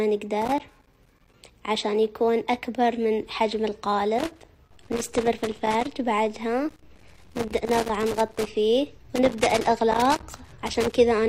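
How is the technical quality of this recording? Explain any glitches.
The recording is marred by repeated loose connector crackle, in four bursts: 0.42 to 1.34 s, 4.19 to 5.91 s, 6.69 to 8.49 s and 9.16 to 10.96 s. A worn or dirty contact keeps making and breaking, chopping the signal into irregular scratchy crackle. Unlike evenly spaced digital clicks, its timing is ragged and gritty.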